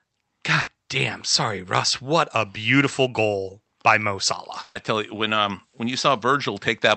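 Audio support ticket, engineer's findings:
Burst of packet loss, twice: 0.61–0.70 s and 4.63–4.78 s, the second right before "tell you when um". Jitter buffer ran dry, so concealment stretched the last sound and faded it (roughly 60 ms, then 120 ms), then jumped ahead past the lost audio. Opus call path, top end stops near 8 kHz.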